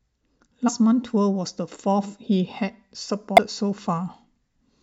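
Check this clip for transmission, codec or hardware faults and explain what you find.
Two short faults break up the speech, both from damaged data in a compressed stream, at 0.68 to 0.70 s and at 3.37 s. At each point part of the encoded stream has been corrupted, so the decoder misreads or rejects the affected frames, loses its place and has to find the next valid frame header before playback resumes. Each event is a brief chirp or blip of about 14 to 20 ms that cuts across the speech.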